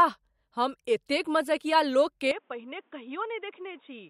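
From 2.31 s, after "हम एतेक मजकिया", the speech abruptly turns dull and boxy, losing everything above 3.8 kHz, dropping slightly in level, and gaining faint background noise: likely an input switched to a poorer device.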